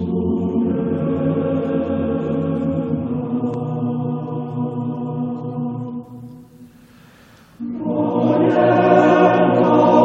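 From the start to 3.54 s there's a doubled audio track: an equally loud, dry copy trails about 300 ms behind, likely from a second, slower capture path, then cuts off abruptly.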